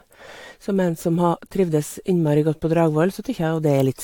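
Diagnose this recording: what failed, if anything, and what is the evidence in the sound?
The codec stage shows generation loss, likely from about four AAC re-encodes: speech sounds swirly, hollow and smeared throughout, attacks blur, nothing above 19.2 kHz.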